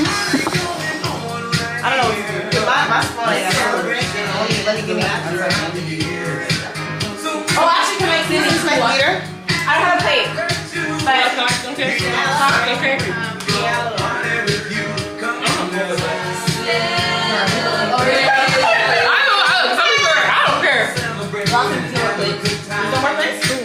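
No technical faults can be heard anywhere in this audio. At no point does the sound break, jump or change in a way that points to a problem in the chain.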